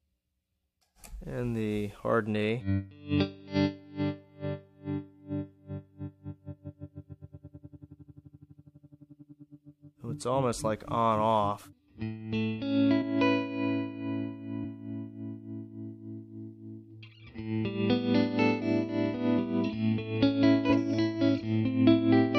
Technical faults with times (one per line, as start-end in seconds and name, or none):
13.01 compressed frames skipped
14.63 compressed frames skipped
20.69 compressed frames skipped